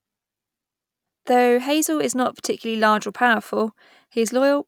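From 2.15 s to the end of the speech, a resampler restarted on every block converts 48 kHz to 44.1 kHz in 10 ms pieces, each with no knowledge of its neighbours. Every block edge is slightly wrong, and at 100 per second the errors fuse into a buzz at 100 Hz rather than separate ticks. Unlike mains hum at a similar pitch, the buzz rides on the speech and vanishes in the gaps.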